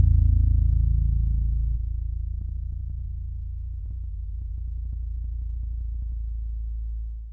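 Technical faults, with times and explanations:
2.34–3.08 s and 3.66–6.12 s, jitter buffer speed-up: the sound briefly hurries at unchanged pitch, about 5% fast and then about 7% fast. The receiver's jitter buffer had built up excess audio and was trimming tiny pitch-period slices repeatedly, dropping roughly 40 ms and then roughly 200 ms.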